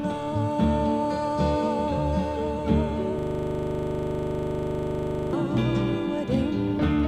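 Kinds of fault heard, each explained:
System hang loop, 3.19 to 5.33 s: the system froze while the hardware replayed one 40 ms buffer repeatedly, giving a rigid 25 Hz buzz.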